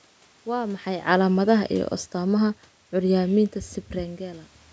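Automatic gain falling runs from 1.07 to 3.55 s: the gain control judged the input too loud or its background noise too strong and eased its gain down by about 5 dB, so the voice sinks steadily in level, with the room noise behind it dropping by the same amount.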